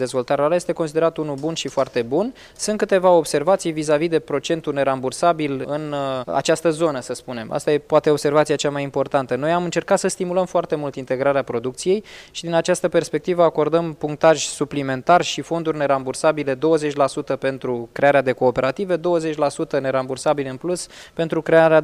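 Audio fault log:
No faults detected at any point in the clip.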